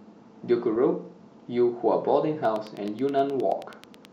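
At 2.45 s a train of clicks begins in the speech. It runs until 4.06 s. The clicks are evenly spaced, at about 9.4 per second, so around fifteen in all. Each has much the same sharp shape. They peak at roughly 5 dB above the speech. The ticking carries straight through any pauses. The cause is likely electrical interference from nearby equipment, or a faulty connection or power supply injecting repeated pulses.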